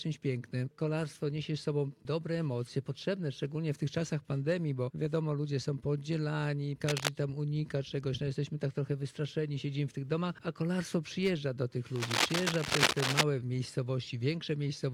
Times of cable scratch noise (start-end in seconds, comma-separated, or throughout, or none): 6.87-7.08, 11.96-13.23